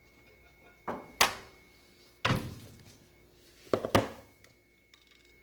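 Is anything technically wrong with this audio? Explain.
Yes. Throughout, tonal parts turn grainy, rough and noisy, likely from Opus compression in its CELT mode filling starved bands with noise, which points to a very low bitrate near 16 kbps.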